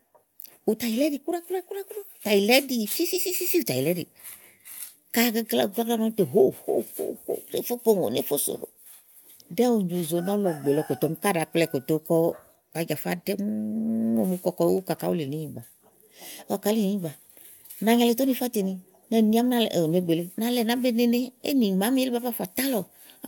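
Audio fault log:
No faults heard in this speech.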